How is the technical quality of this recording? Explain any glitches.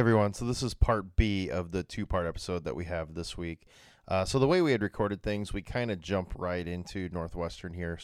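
The recording has no technical glitches to explain. Nothing in the audio points to a problem in how it was captured, processed or delivered.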